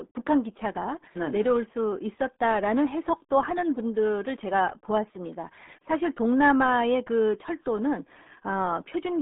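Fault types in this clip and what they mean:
RealAudio 14.4 codec: the speech runs through the whole clip squeezed into a phone-style band of roughly 200 Hz to 3.6 kHz with nothing above 3.8 kHz, muffled and gargly from heavy coding damage, which fits an old 8 kbit/s dial-up modem speech codec.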